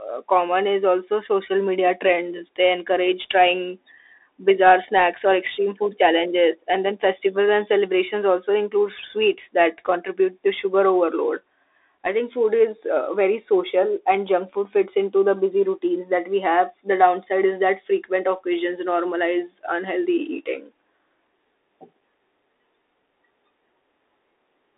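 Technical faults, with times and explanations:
Throughout: Bluetooth CVSD headset codec. The speech is confined to a telephone-style band of about 300 Hz to 3.7 kHz, with nothing above 3.8 kHz, so it sounds thin and boxed-in. The damage is plainly audible: a one-bit up/down coder with an adapting step cannot follow fast, loud transients, which smears them into roughness, and its constant step hunting leaves a granular hiss beneath the signal. This fits a 64 kbps CVSD headset link.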